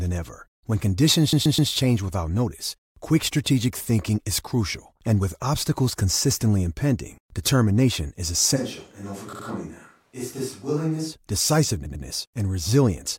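At 1.33 s there's a stutter from repeated frames. A run of compressed audio got sent more than once, so a 128 ms chunk plays three extra times through 1.71 s, adding 384 ms. The same thing happens at 9.33 to 9.46 s, where a 64 ms chunk repeats twice, and at 11.86 to 12.05 s, where a 96 ms chunk repeats twice.

From 8.58 to 11.11 s the speech suddenly goes roomy and hollow, thinner in the bass and around 10 dB quieter, with room noise sitting well below it. That's likely a switch to a distant microphone after the close one dropped out. It snaps back at the end.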